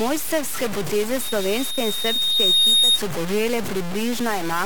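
A speech clip in which the whole recording sounds coarse and gritty, most likely from low bit depth without dither: it fits about 3 bits with truncation, giving a stair-stepped waveform and signal-following distortion close to the speech level. A loudspeaker feedback squeal runs from 1.20 to 3.00 s at 3.7 kHz, swelling for roughly one and a half seconds to well above the speech, a bright horizontal line on a spectrogram.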